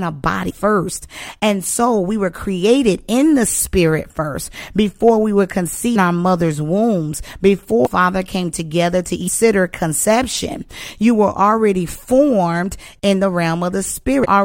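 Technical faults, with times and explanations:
0.49–0.51 s, 5.95 s, 7.85–7.87 s, 9.27 s, 14.24–14.26 s: damaged data in a compressed stream. Corrupted frames make the decoder lose sync and hunt for the next frame header, so the glitch is a codec misread rather than a plain gap.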